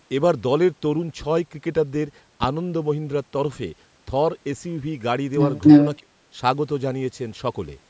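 At 2.44 s, a supply switching on the live microphone input sends a voltage step through the coupling capacitors, producing a phantom power thump. It lands in the speech as a deep, blunt knock lasting until about 2.51 s. The low-frequency energy dies away quickly, with a decay of only about 18 ms, so the result is a short, solid bump rather than a long rumble.

From 5.61 to 5.97 s, an echo leak comes through. This is likely because the far end is on a loudspeaker and its echo canceller fails to strip out what its microphone picks up. That residue is sent back, so a copy of the speech returns about 289 ms late. The leaked copy is prominent, roughly 10 dB above the speech around it, and sounds like a delayed repeat layered over the talker.

Right after, from 5.99 to 6.16 s, comes speech suppressed in double talk. The echo canceller likely cannot separate the near talker from the loudspeaker echo while both are active, and it clamps down on the whole signal. 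The talker drops sharply, by around 35 dB at the deepest point, and the speech is gouged out for roughly 150 ms. It sounds like a brief dropout in the voice.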